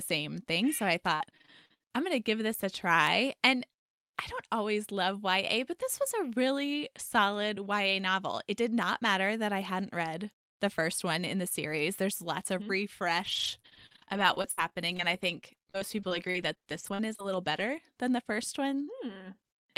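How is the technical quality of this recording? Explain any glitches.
Two bursts of repeated packet loss (robotic sound) mar the speech, from 1.07 to 1.82 s and 13.18 to 17.74 s. Dropped packets, with gaps up to 59 ms, are patched by repeating the last sound, giving choppy speech with pieces missing that shows as smeared, repeated frames on a spectrogram.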